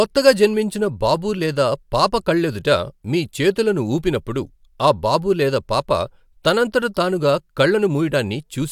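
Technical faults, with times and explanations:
No technical faults can be heard in this speech recording. There is nothing here to time or explain.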